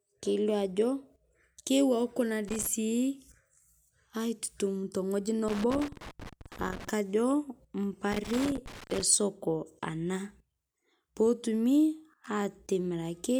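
Loose connector crackle hits the speech at 2.48 to 2.67 s, 5.48 to 6.89 s and 8.12 to 9.02 s. A contact is intermittently opening and closing, chopping the signal into irregular scratchy bursts. The waveform shows jagged dropouts and spikes, and the spectrogram shows ragged broadband vertical streaks.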